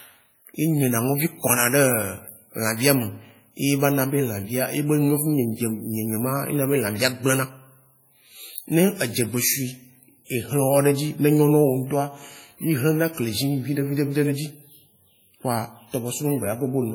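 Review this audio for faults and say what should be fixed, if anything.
WMA compression, throughout the speech: the audio has heavy transform-codec damage, with ringing around the voice, a washy smear, and a hiss that swells and fades with the signal. This is likely a WMA 1 encode at a very low rate, with the damage pointing to around 32 kbps. Long transform blocks spread quantisation noise across tens of milliseconds, and weak spectral lines are zeroed, even though content still reaches up to 20.1 kHz. To prevent it, keep the recording in a lossless format or encode with a modern codec at a much higher bitrate.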